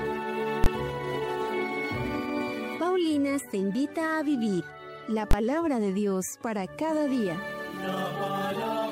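The audio has two bursts of invalid numbers at full scale, at 0.64 to 0.66 s and 5.31 to 5.33 s. Each lasts about 21 ms, which fits a 1024-sample processing block. A calculation produced infinite or invalid values, and these were forced to an extreme output level. The signal jumps to a flat level far beyond the audio's normal peaks, and because the block is so short, each event is heard as a single bang rather than two separate pops.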